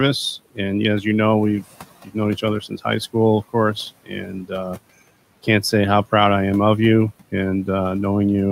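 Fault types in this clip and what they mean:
Speech cut by the noise suppressor: the suppressor mistook brief stretches of speech for noise and pulled them down together with the background, so at 1.95 to 2.16 s, just before "each other", and at 4.04 to 4.30 s, just after "school of course", the sound thins and swallows by about 17 and 18 dB. Unlike a dropout, it never goes fully silent or clicks, and the room noise, about 21 dB below the speech, dips along with it.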